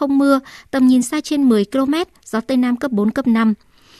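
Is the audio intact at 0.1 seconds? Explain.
Yes, at 0.1 seconds the speech plays through intact, with no audible dropout, click, distortion or other fault at that moment.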